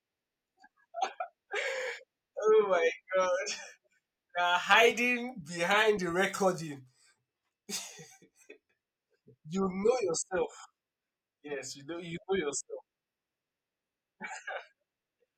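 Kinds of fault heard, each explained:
No dropouts, distortion, added noise or other technical faults can be heard anywhere in this speech recording.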